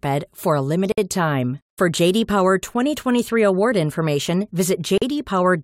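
Gaps at a join of encoded pieces fall at 0.92 to 0.98 s (57 ms) and 4.98 to 5.02 s (40 ms), four seconds apart. Each piece was encoded separately and joined untrimmed, so encoder start delay and end padding leave a brief silence, its edges smeared by the codec, before the speech resumes where it stopped.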